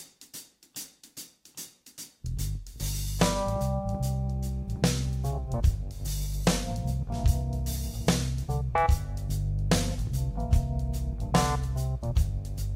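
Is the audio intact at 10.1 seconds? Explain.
Yes, the audio is intact at 10.1 seconds, with no dropout, click, distortion or other fault audible at that point.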